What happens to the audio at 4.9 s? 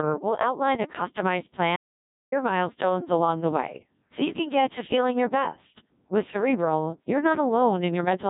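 At 4.9 s the speech is still under the Codec 2 vocoder damage that runs through the whole clip. The waveform is discarded and rebuilt from sine waves using only pitch, voicing, energy and spectral envelope, which fits roughly 1.6 kbit/s. The voice sounds heavily robotic and buzzy, with nothing above 3.8 kHz.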